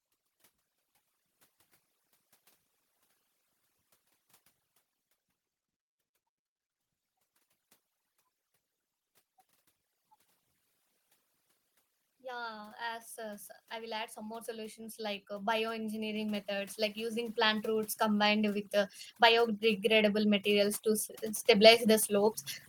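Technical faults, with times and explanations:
Throughout: overdone noise removal. The noise reduction on this speech was pushed too hard. Each frequency band that drops near the tool's noise estimate is cut deep or shut off. Quiet parts of the speech fall below that line and vanish with the noise. The background becomes near silence dotted with twinkling specks.
12.05 to 18.63 s and 19.17 s to the end: automatic gain rising. The automatic gain control judged the input too quiet. It raised its gain slowly rather than in a jump. In the first stretch the level climbs by about 15 dB over more than six seconds. It rises again from 19.17 s until the clip ends. Speech and background swell together, so the processed residue and specks grow louder along with the speech.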